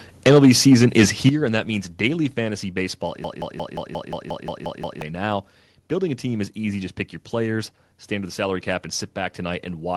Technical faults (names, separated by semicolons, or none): microphone overload; microphone volume stepped down; broken-record loop